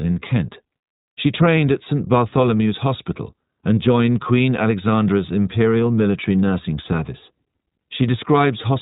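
Throughout the speech, the iLBC codec limits the band to below 4 kHz and codes each 20 ms frame on its own, leaving a rough, slightly synthetic texture. The damage is plainly audible. Unlike a simple low-pass filter, it adds that coded graininess, which fits a rate near 15.2 kbps.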